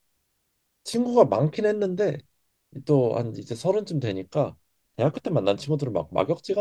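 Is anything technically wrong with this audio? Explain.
No, nothing is technically wrong with this audio.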